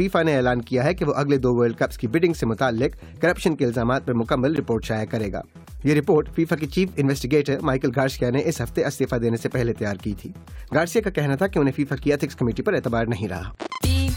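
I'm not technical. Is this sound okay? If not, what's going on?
No, not quite. At 4.56 s there is a tiny dropout, about 14 milliseconds of silence. It's a gap between stream segments. Streamed audio arrives in short chunks, here probably about 6 seconds each. The timing of two chunks didn't line up exactly, leaving a small hole. The player filled that hole with silence. You may hear a brief click or stutter with sharp edges. Nothing is actually missing from the sound.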